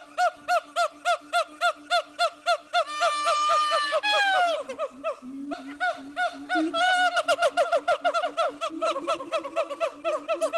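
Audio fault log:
5.53 s, skip ahead: playback jumps straight past about a second of audio with no gap and no fill. A stretch that was lost in transit, or thrown away when the jitter buffer overflowed, is simply missing, while audio that was already queued plays on. The two sides of the cut are butted together almost directly, so the sound lurches forward rather than pausing.
5.63–6.99 s, jitter buffer speed-up: right after the jump, the audio runs at about 109% speed while the pitch stays put, so this passage sounds hurried. The buffer was still holding more audio than it aims for, and to bring the delay down the receiver repeatedly removed short slivers, each one or a few pitch periods long, totalling roughly 150 ms. The call codec's coding noise and its top end, which stops near 12 kHz, carry through this passage as well.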